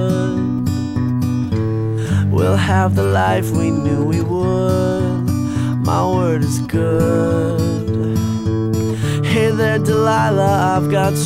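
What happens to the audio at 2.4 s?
At 2.4 s the audio carries mains buzz, which runs from 1.53 s to 3.68 s. Sharp switching spikes from 60 Hz mains power leak in twice per cycle, 120 times a second, producing a steady, raspy buzz sitting roughly 35 dB below the sound. On a spectrogram it appears as a comb of evenly spaced horizontal lines at multiples of 60 Hz reaching several kHz. In the waveform it shows as a faint regular train of spikes about 8.3 ms apart.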